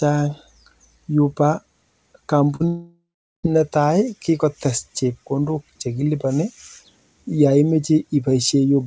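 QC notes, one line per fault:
2.56–2.62 s, short concealed packet loss: about 40 ms failed to arrive and was filled by extending the preceding speech, heard as a brief smear.
2.68–3.45 s, long network dropout: the last sound stretches into a fading buzz, then about 0.39 s of silence before speech resumes, that stretch lost, likely to a network outage.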